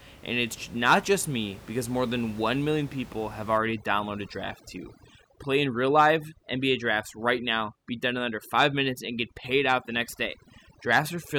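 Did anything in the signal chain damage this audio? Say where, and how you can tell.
Yes: overdone noise removal in the call-processing stage, from about 3.58 s to the end of the clip. The room noise, sitting about 21 dB below the speech, collapses there into near silence with twinkling specks. A suppressor set too aggressively is gating individual frequency bands that hover near its noise estimate, taking the quieter speech components with them. On a spectrogram, the background becomes blank with scattered isolated dots, and the speech harmonics look ragged and gappy.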